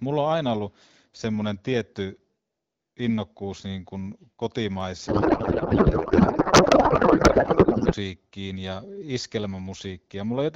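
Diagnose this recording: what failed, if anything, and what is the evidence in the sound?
Codec-stage payload misread, 5.07 to 7.94 s: the speech becomes garbled warble and the spectrogram loses its harmonic structure, which points to octet-aligned AMR-WB frames parsed as bandwidth-efficient.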